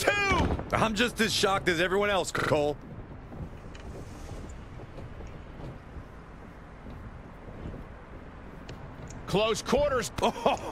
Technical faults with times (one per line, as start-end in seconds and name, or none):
2.39-2.52 repeated buffer
3.80-3.84 repeated buffer